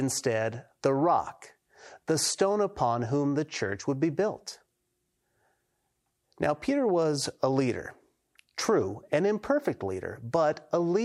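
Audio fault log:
No faults are audible anywhere in this speech recording.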